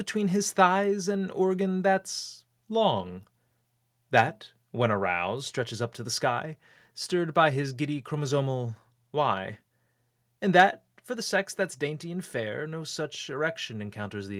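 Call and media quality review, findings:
Microphone overload, 4.17–4.20 s (before "when aroused stretches up") and 10.59–10.62 s (before "for the sex that's"): harsh crackle on speech peaks, likely input gain driving the converter about 2 dB past full scale. Waveform shows flat-topped peaks on roughly 1 to 1.5 percent of samples; the spectrogram shows brief broadband smear.

Microphone volume stepped down at 11.16 s, before "the sex that's dainty": voice and background drop together by about 2 dB, likely call-software AGC reacting to the preceding overload. The waveform envelope steps down abruptly, with no fade.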